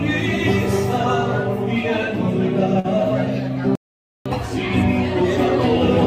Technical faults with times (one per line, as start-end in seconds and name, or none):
2.79-2.86 short stall from a late packet
3.75-4.26 playback stall